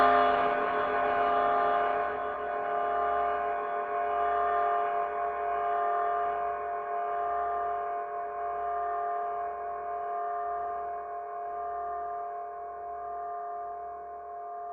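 No technical faults are audible.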